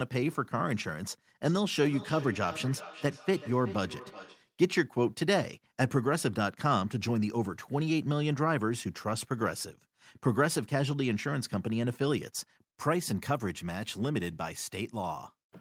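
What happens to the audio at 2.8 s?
At 2.8 s the clip is in a stretch of feedback echo between two devices, running from 1.41 s to 4.54 s. A second device in the same room plays back what the first microphone sent, and that microphone captures it again, so its echo canceller cannot remove it. The speech returns at a steady interval of around 400 ms, with repeats reaching about 15 dB below the direct speech and sounding thinner and more ringing than the original.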